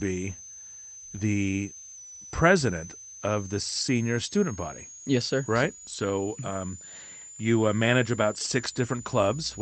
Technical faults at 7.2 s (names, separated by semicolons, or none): switching supply whistle